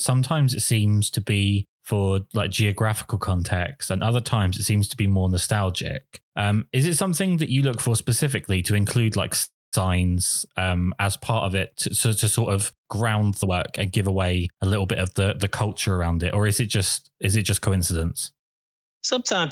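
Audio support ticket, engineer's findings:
Call audio freeze, 9.43–9.75 s, after "specifically to include like": likely delayed packets emptying the jitter buffer. Last sound stretched as a fading buzz, then about 0.21 s of silence. Speech resumes intact; a 0.29 s gap is inserted, adding latency.

Jitter buffer speed-up, 13.42–14.63 s, between "to sort of ground" and "little bit of the": receiver trimming excess buffered audio by cutting pitch-period pieces, about 0.3 s in total. Speech runs 123% speed, pitch unchanged, sounds hurried.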